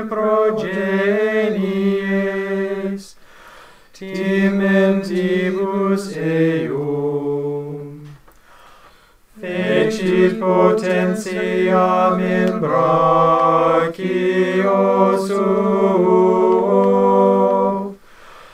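No technical faults can be heard anywhere in this audio; the signal stays continuous and stable throughout.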